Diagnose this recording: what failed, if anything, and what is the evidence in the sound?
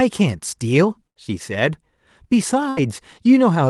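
A burst of packet loss at the network stage occurs twice, from 1.07 to 1.17 s and from 2.69 to 2.79 s. Each time, about 80 ms of speech is missing. The receiver fills the gap by stretching the last sound, which a spectrogram shows as a smeared, fading continuation before the signal resumes with a sudden step.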